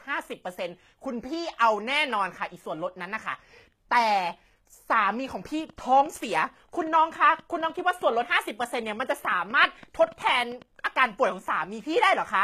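Speech, with treble that sounds rebuilt rather than recorded: content reaches up to 14.9 kHz, yet it is gritty and metallic and its harmonics fail to line up, which points to HE-AAC compression (likely at around 20 kbps) rather than a plain low-pass cut. From 5.60 to 10.63 s a train of clicks ticks over the speech, around thirty pulses of much the same shape at about 6.2 per second, unevenly spaced and roughly as loud as the speech. Their repeated, uniform shape sets them apart from random crackle, and they likely come from interference or a faulty connection or power supply.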